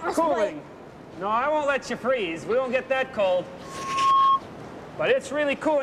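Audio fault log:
3.63 to 4.41 s, loudspeaker feedback squeal: a single tone at 1.1 kHz swells up over about half a second and ends up roughly 10 dB above the rest of the sound. That's the mic hearing its own speaker, with the loop gain tipping past one at that frequency so it feeds itself until the loop breaks.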